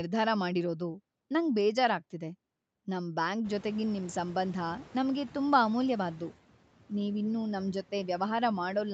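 From 3.45 s the background noise suddenly surges and passes through with little reduction, then sinks by about 5 dB by 5.51 s. This is the noise suppressor catching up: room noise jumped about 22 dB near 3.5 s, and its estimate took 2.06 s to adapt.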